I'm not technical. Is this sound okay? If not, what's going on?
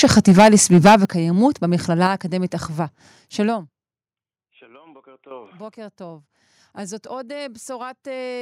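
No. Microphone overload, from 0.03 to 0.96 s: the speech is too loud for the recording, so the tops of the loudest moments are cut flat. That gives a harsh, crackly edge. The likely cause is the microphone's input set too high, so peaks hit the ceiling of what it can record.

Microphone volume stepped down, at 0.05, 1.05 and 2.07 s: the speech and everything around it drop abruptly in loudness, three times in a row. Each drop is sudden, not a fade, most likely the call software turning the microphone down in one jump after hearing it overload.

Zipper noise, from 3.44 to 4.0 s: the sound gets much quieter over about half a second. Instead of gliding down, the level moves in around a hundred tiny steps each second. Each step clicks, so you hear a fast ticking or zipping riding on the audio.

Microphone volume stepped up, at 5.31 s: the speech and background jump up in loudness together, all at once. 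This is the call software deciding the microphone had become too quiet and raising its input in a single step.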